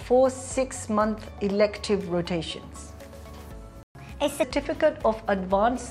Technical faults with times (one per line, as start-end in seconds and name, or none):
3.83-3.95 playback stall
3.95-4.43 catch-up at higher speed